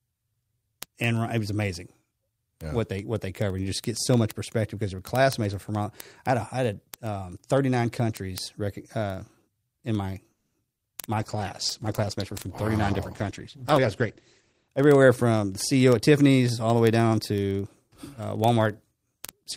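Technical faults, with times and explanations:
0.10–19.57 s, word clock ticks: A steady stream of sharp ticks of uneven strength, about 25 per second. The receiving device runs on its own clock, drifting by around 500 ppm, so each time the clocks slip, one sample is dropped or repeated.
10.31–10.56 s, call audio freeze: The speech stalls into a fading buzzy continuation of the last sound for 230 ms, without dropping to silence, then resumes where it left off with nothing lost. The likely cause is delayed packets draining the jitter buffer, adding 230 ms of delay.
10.72, 10.75 and 10.78 s, short concealed packet loss: Three quick smeared wobbles in a row, each about 30 ms long. In each, 20 ms of the call failed to reach the decoder and was replaced by 10 ms extrapolated from the preceding sound, then blended back in.
11.19–14.75 s, call bitrate drop: The speech turns rough and muffled, losing its top end. 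The encoder was forced down from 40 to 12 kbps when the bandwidth estimate fell, coding more coarsely and narrowing the audio band from 20 kHz to 8 kHz.
13.73–14.06 s and 14.68–16.29 s, jitter buffer speed-up: The speech sounds hurried while keeping its pitch, first at 119% speed, then at 109%. To cut excess buffered delay, the receiver repeatedly removed short pitch-period pieces, roughly 70 ms and then 150 ms in total.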